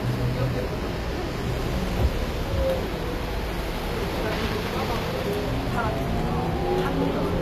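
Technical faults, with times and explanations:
Throughout, HE-AAC compression. The damage is plainly audible across the whole clip. Nothing reaches above 14.9 kHz. The upper range sounds bright but false, with a gritty, metallic edge on sharp, hissy detail. The likely cause is a low-bitrate HE-AAC encode, which fits a rate near 24 kbps. Only the lower spectrum is truly coded. The treble is rebuilt by copying lower bands upward under a coarse envelope. Its harmonics do not match the real ones.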